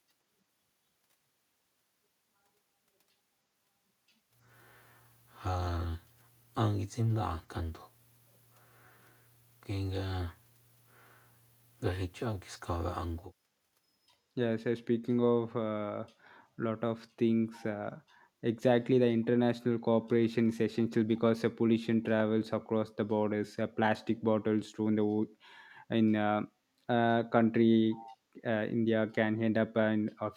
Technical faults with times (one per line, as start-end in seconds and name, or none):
27.96-28.17 echo leak